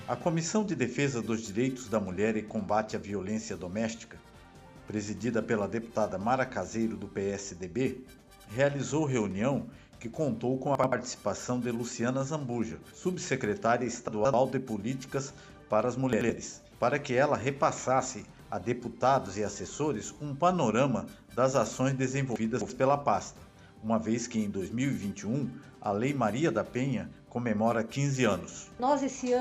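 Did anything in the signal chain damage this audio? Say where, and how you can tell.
Yes. Short jumbled moments at 10.75–10.92, 14.08–14.34, 16.13–16.30 and 22.36–22.70 s are chunks out of order in the buffer stage. An 85 ms chunk plays one to three chunks late, leaving three hard joins each time.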